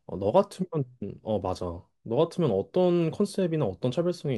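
Nothing stood out on listening to this speech recording; no technical fault could be heard anywhere in it.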